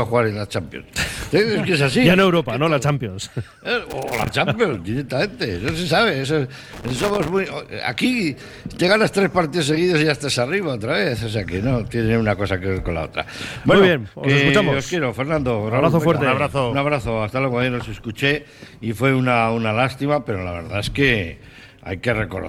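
At 3.90–4.29 s and again at 6.73–7.30 s there's loose connector crackle: a dirty contact cutting in and out, chopping the signal into scratchy bursts.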